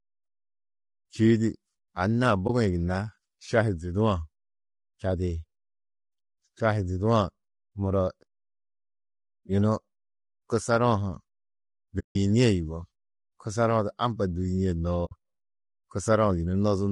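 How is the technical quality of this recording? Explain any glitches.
The quality is compromised: the speech sounds rough and grainy all the way through, and three short dropouts interrupt it.

Low-delay AAC compression, throughout: the voice has a grainy, noisy texture and a dull top band, likely from an AAC-ELD low-delay codec at a bitrate of about 32 kbps.

AAC frame loss with muting, at 2.47–2.50 s, 11.99–12.16 s and 15.05–15.12 s: the decoder zeroed the lost audio, leaving a brief dip at the first and soft-edged holes at the others that fade out and back in.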